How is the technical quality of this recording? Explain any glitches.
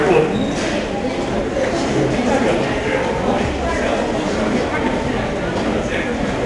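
Quality is poor throughout, with audible 4-bit ADPCM compression across the whole recording. Each sample is coded as a coarse 4-bit step from a prediction, so the quantisation error rides on the signal as gritty hiss, and attacks smear where the step adapts too slowly. Nothing reaches above 10.7 kHz, consistent with roughly 89 kbps.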